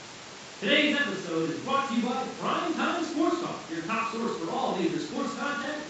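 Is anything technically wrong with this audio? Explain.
No, nothing here is technically wrong.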